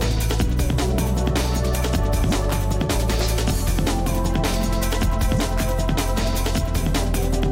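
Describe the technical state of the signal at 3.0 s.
At 3.0 s the signal is intact, with no audible fault at that point.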